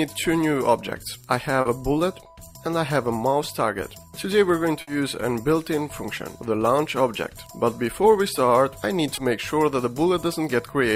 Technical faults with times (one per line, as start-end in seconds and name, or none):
1.61-1.67 short concealed packet loss
4.81-4.89 burst of packet loss
9.15-9.19 short concealed packet loss